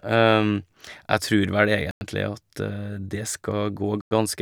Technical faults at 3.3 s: none

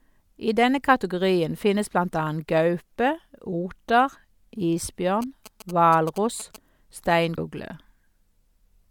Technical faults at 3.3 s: none

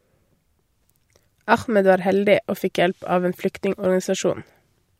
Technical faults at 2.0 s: none

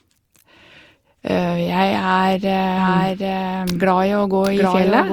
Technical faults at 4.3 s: generation loss; doubled audio track

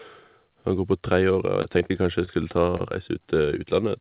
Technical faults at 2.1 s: repeated packet loss (robotic sound)

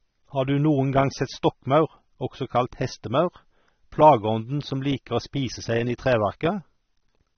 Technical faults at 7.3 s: AAC compression

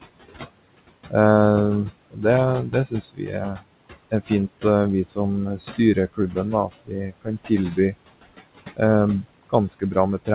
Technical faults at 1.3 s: noise suppressor artifacts

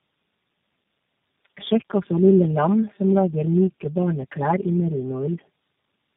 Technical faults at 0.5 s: channel delay (comb filtering); tandem speech coding

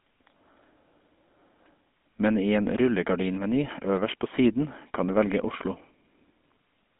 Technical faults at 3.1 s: GSM full-rate codec

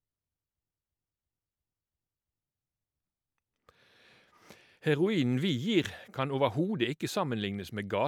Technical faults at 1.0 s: system hang loop

